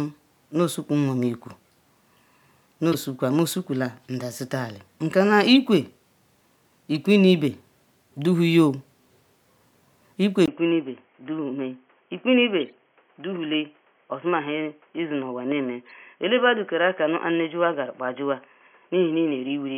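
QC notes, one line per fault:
2.92–3.00 s, 5.55 s, 6.95–6.97 s and 12.60–12.72 s, corrupt frame decoded: each is a short chirpy blip where damaged compressed data was decoded anyway, so energy lands at the wrong frequencies for as long as the bad frames last. The first two span a few frames, the third a single frame, and the last is the longest at roughly 120 ms. Peaks sit around -15 to -25 dBFS. Unlike a dropout or click, the audio briefly turns into garbage.
10.46–19.78 s, input switched to a poorer device: from 10.46 s the sound turns dull and boxy, with nothing above 3.3 kHz. A 20 ms gap marks the change, the level falls by about 5 dB, and a new background noise sits about 40 dB below the signal. The likely cause is a change of input to another microphone or a headset call profile. A plain low-pass filter or codec bandwidth change would not bring the gap, the level shift and a different background noise.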